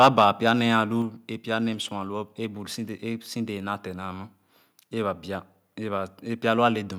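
From 0.0 to 0.73 s the loudest syllables crackle harshly: microphone overload, with input gain likely set high enough to push peaks about 5 dB past the converter's limit. The waveform shows flattened, squared-off peak tops; the spectrogram shows brief broadband smears above the harmonics.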